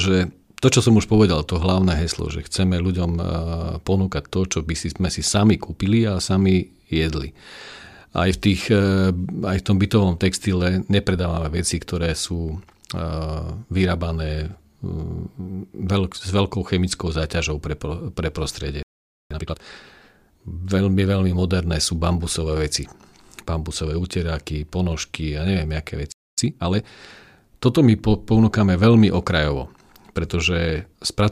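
Just after "chemickou záťažou pre pre", the speech cuts out at 18.83 s and stays silent for about 0.48 s until 19.31 s. This is a playback stall: the player most likely ran short of data or had its output thread held up, so nothing reached the output until it recovered.

From 19.31 to 19.77 s the speech comes back hurried, at twice normal speed but at unchanged pitch. This is time-compressed catch-up. To clear the backlog left by the stall, the player drops small slices of audio and cross-fades the remaining pieces together, which packs more speech into less time.

The same pattern returns later. After "ponožky a neviem aké", a second playback stall silences the sound from 26.12 to 26.38 s, a gap of about 0.26 s. Again the likely cause is starved or blocked playback. Time-compressed catch-up follows from 26.38 to 26.88 s at 1.5 times speed. This speed-up is milder, but it has the same rushed quality at normal pitch.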